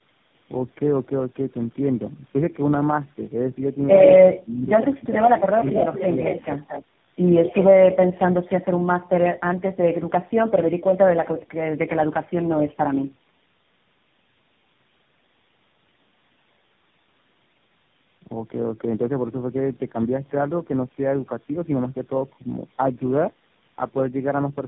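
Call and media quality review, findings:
Rough, muffled, warbly speech throughout, with nothing above 3.8 kHz. Tandem speech coding: four speech codecs in a row (AMR-NB, GSM full rate twice, then AMR-NB again) with G.711 legs between them. Each decode and re-encode stacks on the previous coder's damage.

Speech dips from 4.96 to 5.2 s, about 25 dB down at the deepest point, affecting around a fifth of a second. Likely speech suppressed in double talk: the echo canceller mistook the near-end talker for loudspeaker echo and attenuated both.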